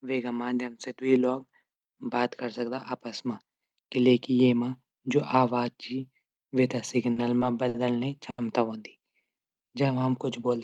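Just after "वे थै", at 7.13 s, a short stall from a late packet holds the sound 30 ms. Similar stalls at 7.68 s and 8.30 s hold it 60 and 80 ms, with a slight buzz or dip.

From 9.03 to 9.99 s, a jitter buffer slow-down repeats pitch periods, adding 109 ms. Speech drags at 90% speed, same pitch.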